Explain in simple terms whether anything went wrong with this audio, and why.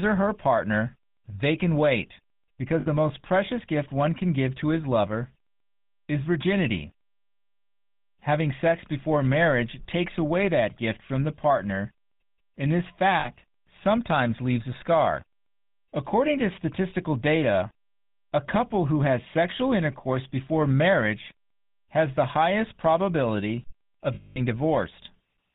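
The whole clip went through the GSM full-rate codec, the old phone codec, so the speech sounds buzzy and gravelly, with everything above 4 kHz cut off.

There are also lost GSM frames, where the codec kept repeating the last good bit of sound, giving a brief metallic ring: for 60 ms at 2.8 s, just before "the most precious gift"; for 40 ms at 13.2 s, between "and this" and "sometimes leaves a scar"; and for 220 ms from 24.14 to 24.39 s, right after "has the highest probability".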